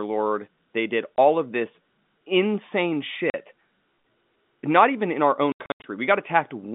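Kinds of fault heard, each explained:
Packet loss filled with silence: lost 20 ms packets were replaced by silence, cutting hard-edged holes in the speech, worst near 5.5 s after "even in our".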